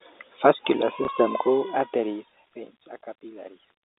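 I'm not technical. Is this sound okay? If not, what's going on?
No, there's one glitch. Around 1.05 to 1.08 s, packet loss with last packet repeated: a 30 ms piece went missing and the previous bit replayed, giving a small blip.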